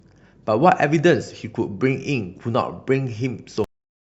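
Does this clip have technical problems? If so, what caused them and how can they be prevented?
Yes, there is a cut-off end: the final buffers were never written out, so at 3.64 s the speech stops mid-sound and drops straight to digital silence without any decay. Flushing and closing the recording or encoding stream fully before finalising the file would prevent it.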